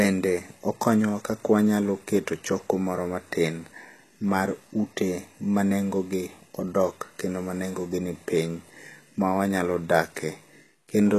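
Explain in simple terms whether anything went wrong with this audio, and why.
Yes, something's off, and it runs through the whole clip. The top end of the speech sounds bright but not quite real, and the s sounds come out gritty and a bit lispy. That points to HE-AAC compression, likely at a low setting. This kind of compression keeps only the lower part of the sound and fakes the treble by copying lower bands upward, so the highs don't match the voice underneath. Nothing comes through above about 12.4 kHz.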